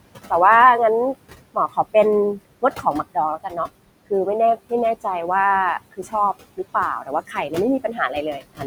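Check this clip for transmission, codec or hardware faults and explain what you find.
Two related faults come from an aggressive noise suppressor acting on this speech: processing artifacts throughout the clip, and six places where parts of the speech itself were suppressed.

Noise suppressor artifacts are present from start to finish. Between phrases the background drops away, then swells back under each phrase. The suppressor pulls the bands it judges to be steady noise down by about 21 dB frame by frame. The room noise sits only about 14 dB below the speech, so it is cut hard between phrases and let back through under the voice, giving that pumping, unstable background.

Speech cut by the noise suppressor occurs at 1.54–1.95 s, 2.62–2.86 s, 3.38–3.57 s, 5.91–6.14 s, 7.01–7.52 s and 8.38–8.65 s. In each span, brief stretches of the speech, adding up to roughly a tenth to a fifth of a second, turn faint or swallowed, as if a syllable's edge went missing. 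The suppressor mistook these quieter speech fragments for noise and dimmed them with the background, by as much as about 19 dB at 1.54 s and about 11 dB at 2.62 s and 7.01 s.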